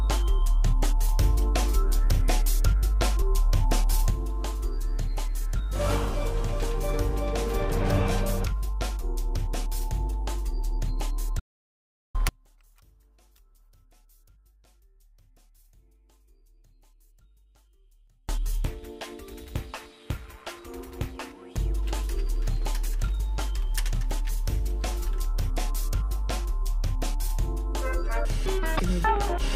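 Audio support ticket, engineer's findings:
Hard cut to total silence at 11.40 s, sound resuming at 12.15 s, about 0.75 s lost, no room tone in the gap. Input path dropped out while the recorder kept writing silence. Likely a momentary device disconnect or link failure. Audio dropout to silence, content in gap unrecoverable.

From 12.29 s to 18.29 s, the centre of the image collapses on mono playback, leaving a faint residue about 36 dB down. One channel inverted: reversed polarity on one side cancels the common content when summed. Likely a polarity flip in the wiring or processing chain.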